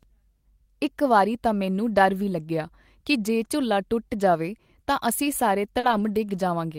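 At 5.79 s, short concealed packet loss: about 40 ms of the speech stream failed to arrive in time, and the receiver bridged the hole by extending the preceding sound before crossfading back. Until 5.85 s this comes through as a brief smear or wobble.

Overlapping it, from 5.83 to 6.01 s, comes a lost packet rebuilt from error correction. About 100 ms, which fits five 20 ms packets, was decoded from low-bitrate redundant copies carried in following packets. There is no gap, but the passage sounds audibly rougher and noisier.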